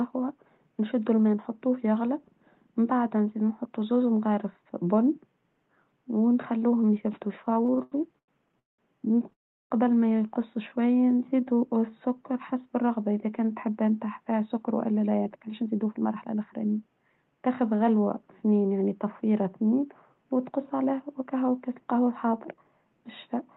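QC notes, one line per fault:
7.45–8.80 s, repeated stalls (stutter): The speech catches and drags in a choppy run of 13 brief hangs, the longest 192 ms, with about half a second of held-over sound making up 36% of this stretch. Packets were arriving late or slower than playback, so the jitter buffer kept running dry. Each time, the receiver extended the last sound until audio resumed. Nothing is lost, but the flow stumbles.
9.33–9.72 s, call audio freeze: The audio stops dead for 370 ms, almost all of it (360 ms) plain silence, and then picks up again at "ما يقصوا". The likely cause is packets held up in transit, leaving the jitter buffer empty. The receiver bridged the wait and then carried on from where it stopped. The result is an inserted gap that pushes everything after it about 370 ms later, with no speech missing.
10.69–12.59 s, jitter buffer slow-down: Between "ما يقصوا" and "الرغبة إذا كانت حبان" the speech turns slow and drawn out, running at 88% speed at unchanged pitch. 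After the stall, the receiver rebuilt its reserve by repeating single pitch periods and slivers of pauses many times over. This added 240 ms in total, which is why syllables sound stretched and slightly sluggish.
14.25–17.48 s and 20.79–21.22 s, jitter buffer speed-up: The speech sounds hurried at normal pitch, at 112% speed in the first stretch and 110% in the second. The second stretch falls between "يعني تفويرها اثنين وتقص" and "وكاس القهوة الحاضر". The jitter buffer held more audio than it wanted, so the receiver trimmed tiny pitch-period slices repeatedly. This removed roughly 0.4 s in the first stretch and a few hundredths of a second in the second, giving a rushed, clipped delivery.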